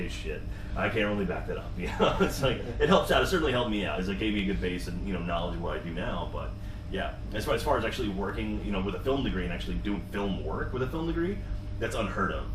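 Compressed frames skipped at 0.51 s: the decoder never plays roughly two frames of about 42.7 ms each, so the audio jumps ahead by around 100 ms, leaving a short blip or click at the join.

Compressed frames skipped again at 3.97 s, this time roughly three frames, about 150 ms.

Periodic USB or driver dropouts run from 4.39 s to 10.21 s. Something blocks the bus or driver once every 1.0 s, and a tiny fraction of a millisecond of audio is skipped each time. This gives about seven evenly spaced ticks while sound is present.

Within that stretch, compressed frames are skipped at 7.51 s and 9.94 s, each time roughly two frames, or about 100 ms, with the same jump forward.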